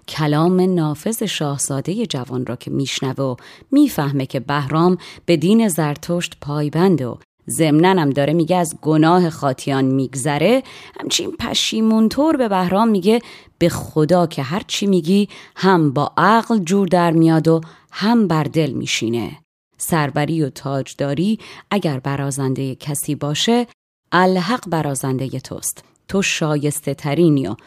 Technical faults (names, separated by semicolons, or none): none